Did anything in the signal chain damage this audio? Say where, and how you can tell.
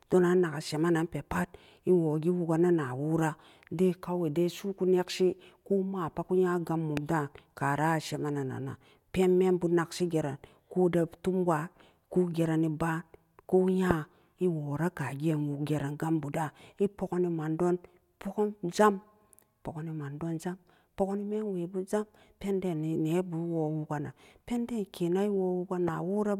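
Yes. Three loud pops sit at 6.97–6.99 s, 13.91–13.93 s and 25.88–25.90 s. Each is a single burst some 10 to 20 dB above the speech, which continues unbroken underneath, unlike a dropout. A voltage step in the analogue wiring, likely static or a plug, adds them.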